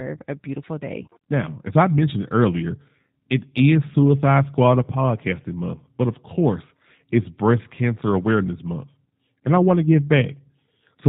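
A speech recording that's been through a G.729 codec from start to finish: nothing above 4 kHz survives, and the voice has that rough, slightly synthetic edge from being rebuilt out of a vocal tract filter, a pitch predictor and a few pulses per frame, which fits an 8 kbit/s VoIP link.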